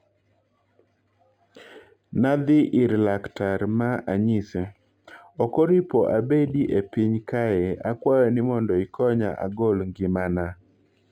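Speech with a dulled top end and a faint metallic shimmer on sibilants throughout. This is imaging from linear upsampling: straight-line interpolation, consistent with a rise from 11 kHz to 48 kHz, leaves a weak mirror image between 5.5 kHz and 11 kHz, roughly 45 dB down.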